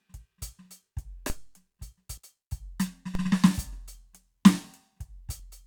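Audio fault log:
1.30 s and 3.15 s, DC step: the waveform's zero line jumps suddenly, then creeps back as a roughly 5 Hz high-pass bleeds the offset away. Each step is heard as a low thump under the unchanged music. On a spectrogram it appears as a brief smudge at the very bottom.
2.17–2.19 s and 5.39–5.42 s, compressed frames skipped: the music jumps ahead, by about a tenth of a second at the first point and somewhat less at the second, which fits whole 20 ms codec frames going missing. The waveform shows a discontinuity in the music's flow.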